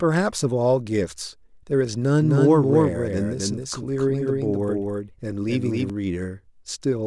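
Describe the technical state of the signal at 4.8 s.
At 4.8 s a doubled audio track is running (2.22 to 5.90 s): a full-band copy, roughly 300 ms late and somewhat quieter, likely from a second capture path. It shows as offset duplicate waveform and spectrogram patterns that start and stop abruptly.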